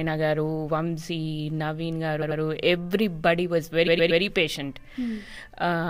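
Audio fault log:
2.21–2.40 s, repeated frames: a roughly 93 ms block, which fits about four compressed frames, plays twice more, so you hear a stutter and about 0.19 s added.
3.86–4.21 s, repeated frames: a 116 ms chunk, likely five frames, loops three extra times, giving a longer stutter and adding about 0.35 s.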